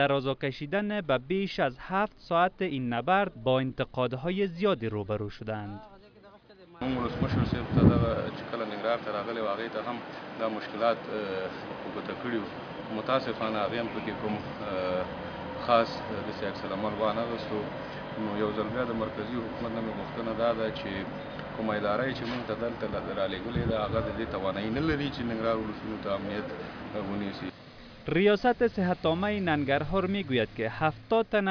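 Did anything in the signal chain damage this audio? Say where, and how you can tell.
No, nothing in the signal chain damaged this audio.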